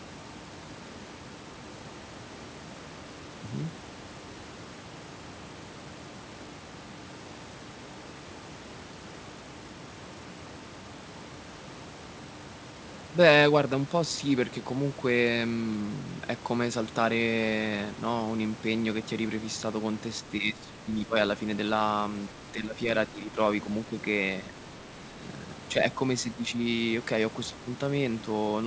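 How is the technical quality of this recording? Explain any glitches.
The recording has one recurring glitch in its final seconds. It comes through a wideband call path that carries nothing above 8 kHz.

Speech suppressed in double talk occurs at 20.2–21.2, 22.5–22.8, 23.1–23.3, 24.47–24.55, 25.12–25.23, 26.2–26.6 and 27.5–27.7 s. The likely cause is an echo canceller treating the talker as loudspeaker echo. The speech dips briefly, by up to around 10 dB.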